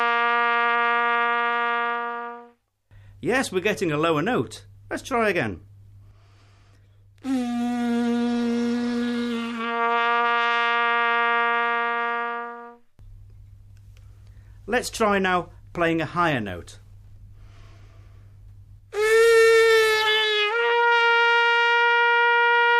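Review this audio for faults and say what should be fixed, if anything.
Nothing stood out on listening, so there is nothing here that needs fixing.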